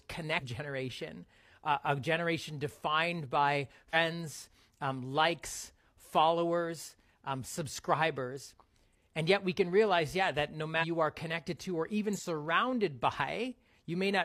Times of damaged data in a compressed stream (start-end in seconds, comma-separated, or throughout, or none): 0.37-0.43, 3.90-3.96, 10.78-10.84, 12.12-12.20